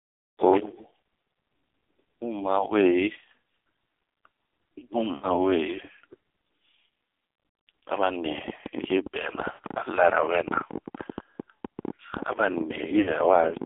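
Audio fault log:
Throughout: AMR narrowband mobile codec. The speech is confined to roughly 200 Hz to 3.6 kHz, with nothing above the narrowband limit, and heavy coding damage gives a buzzy, synthetic quality, which fits a low bitrate around 5.9 kbps driving a sparse vocal-tract model.
5.16–5.28 s, 9.52–9.77 s, 13.02–13.14 s: lost AMR speech frames. Each gap holds roughly 40 to 60 ms of missing frames. The decoder repeats the last good pitch and vocal-tract settings at falling gain, so the sound smears, dips toward silence, then returns rough.
8.26–13.65 s: train of clicks. Similar-shaped pulses arrive at an uneven pace, about 11.7 per second and around 70 in all, standing roughly 10 dB above the signal and ticking through pauses too, likely interference from nearby equipment or a faulty connection or power supply.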